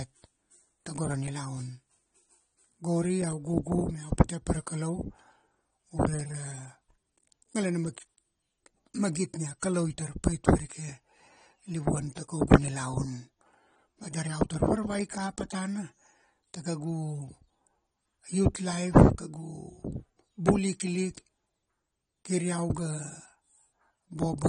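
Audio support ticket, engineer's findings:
Dull, smeared speech throughout, nothing above 9.8 kHz, fizzy warble on sibilants and sustained sounds. Likely AAC compression (AAC-LC): coarse quantisation of spectral lines, lowered cut-off, band holes. Damage plainly audible; fits a bitrate around 32 kbps.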